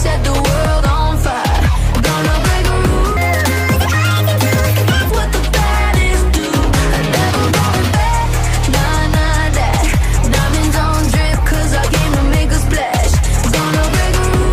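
From 3.17 to 5.10 s, a section at the wrong speed plays 1.68 times fast and roughly ten semitones high, likely from a clock mismatch.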